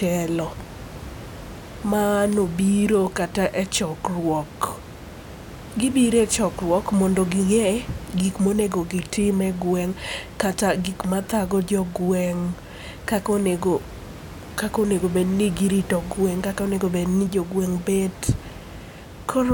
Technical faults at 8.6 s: none

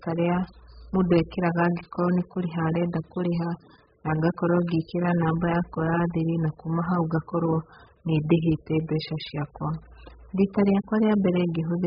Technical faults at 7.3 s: AAC compression

